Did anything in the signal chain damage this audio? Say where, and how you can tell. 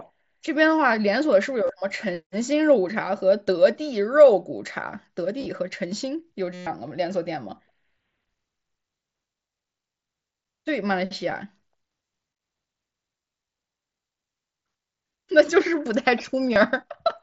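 Yes. Concealed Bluetooth headset packet loss on the radio link between headset and phone occurs at 1.67 to 1.69 s, 5.40 to 5.46 s, 6.54 to 6.67 s and 16.53 to 16.56 s. The short gaps at 1.67 s and 16.53 s each lose 22.5 ms. At 5.40 s, brief losses are scattered over 60 ms. At 6.54 s, 127.5 ms of missing audio turns into a steady buzzy tone at full level, with a small warble where real speech resumes, because the receiver kept repeating its best-matching recent fragment.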